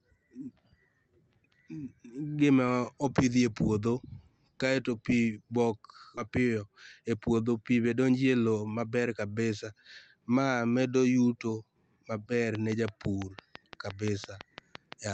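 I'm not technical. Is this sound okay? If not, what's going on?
No. At 6.17 s there's a skip ahead. About a second of speech is dropped and both sides are joined directly, with no silent gap as in a dropout.

From 6.27 to 7.38 s, just before "pii be donjo e", a jitter buffer speed-up makes the speech run about 11% faster. Unlike a sped-up recording, the pitch stays normal.

After "medo yuto maber", from 12.55 to 15.10 s, a train of clicks ticks evenly about six times a second, even in pauses. Unlike random crackle, it's a steady, like-for-like beat, likely interference from nearby equipment.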